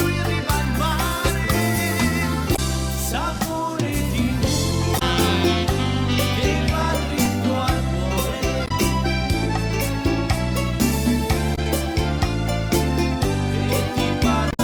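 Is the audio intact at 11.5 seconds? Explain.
No. Damaged data in a compressed stream hits from 11.52 to 11.59 s. The decoder misreads those frames and loses sync. It sounds like a brief chirp, squawk, click or short hole.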